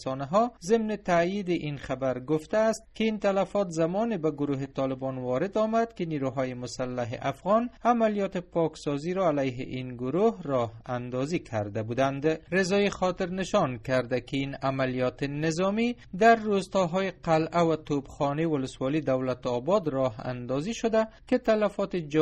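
Clock drift between sender and receiver runs throughout: the sender's clock is about 2% slower, so the receiver's jitter buffer keeps draining and the playback timing never settles. From 0.32 s to 22.04 s, repeated timing corrections follow, as the receiver duplicates short pieces to fill the gap. Together they add roughly 0.4 s, and the audio plays at 98% speed with faint, unevenly spaced hiccups.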